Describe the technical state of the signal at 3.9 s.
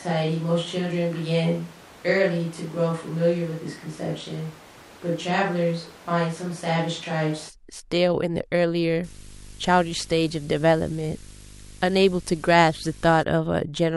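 At 3.9 s the speech sounds roomy and hollow, thin in the bass, about 5 dB quieter, with room noise only about 20 dB below it. This runs from the clip's start to 7.48 s, then cuts back abruptly, likely a switch to a distant microphone after the close one dropped out.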